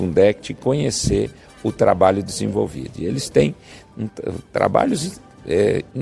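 No technical faults can be heard anywhere in it.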